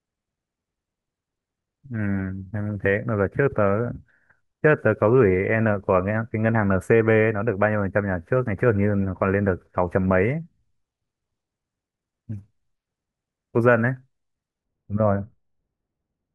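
From 14.64 s to the end at 16.34 s, the speech turns dull and muffled: de-emphasis has been applied wrongly, so a treble cut meant to reverse a pre-emphasis boost hits a signal that never had one, or is applied a second time. The top end rolls off smoothly, reaching about 11 dB down at 10 kHz relative to 1 kHz. On a spectrogram the upper bands fade progressively from that point, while the waveform envelope changes only slightly.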